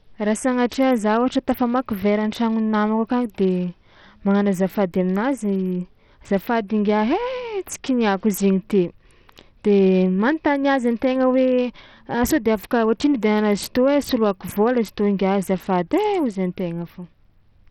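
Throughout the speech, the treble flickers and drops out, and a gritty, grainy noise clings to the sound. Nothing is heard above 17.1 kHz. This is likely Bluetooth SBC compression at a low bitrate. The starved upper sub-bands lose their bits, and the rest is coarsely quantised.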